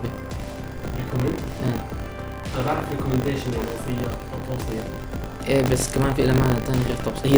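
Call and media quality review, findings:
Buffer tearing, throughout. Robotic buzz at 50 Hz, present only while sound plays, silent in gaps. Hard joins twice per period. Probable component: audio output ring buffer. Writer and hardware read pointer have drifted and cross inside each 20 ms period. Roughly a tenth of each period replays audio from about 70 ms earlier, one lap stale. The repeating splice makes the rattle. Points to a 20 ms buffer period.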